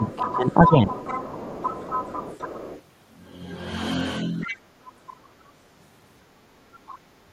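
Speech suppressed in double talk runs from 0.00 to 0.95 s. The talker's voice sinks by roughly 15 dB while a second voice is present, likely because the echo canceller could not tell the near talker from loudspeaker echo and pulled both down.

The other side's voice leaking through overlaps it, from 0.05 to 2.82 s, sitting roughly 15 dB under the speech. This is likely residual loudspeaker sound that the canceller failed to subtract from the microphone.

It leaks again at 4.41 to 4.57 s, and from 4.46 to 4.61 s a brief double-talk suppression clips the talker by a similar amount.

A fainter leak, roughly 25 dB down, appears at 6.89 to 6.99 s.

Background gated by the echo canceller begins at 7.27 s and lasts to the end. The room tone drops by about 12 dB for around 70 ms as the canceller clamps the microphone while the loudspeaker plays.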